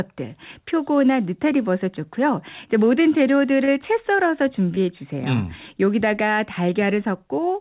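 Brief smears at 3.64–3.69 s and 4.75–4.78 s mark short concealed packet loss, where the decoder stretched the preceding sound over 40 and 20 ms gaps.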